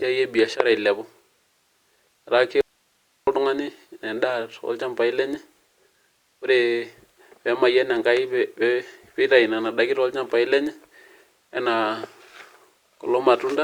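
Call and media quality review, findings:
Audio dropout to a faint residue, speech, 2.61 to 3.27 s. Signal cut abruptly for about 0.66 s, no fade at either edge. Gap holds only low hiss, roughly 45 dB under speech level. Probable component: capture or transport stage upstream of a still-live path, likely a momentary source disconnect or mute, with the downstream chain passing its own noise floor through the break.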